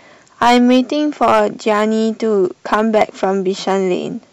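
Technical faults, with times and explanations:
0.42–0.79 s, 1.22–1.83 s, 2.73–3.24 s and 3.69–3.73 s: hard clipping. The speech drives a stage about 9, 6, 7 and 1 dB past its limit, so peaks are sliced flat, adding harsh fuzz on the first three runs and a brief crackle on the last. The waveform shows squared-off plateaus, and the spectrogram shows bright vertical smears of harmonics reaching into the top kilohertz.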